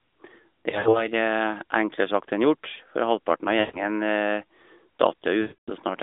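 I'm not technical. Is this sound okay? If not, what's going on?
No. At 0.70 to 1.08 s, 3.60 to 3.79 s and 5.42 to 5.70 s there are lost AMR speech frames: radio errors wiped out bits of the phone call, so the decoder stretched the last sound, which blurs and fades briefly.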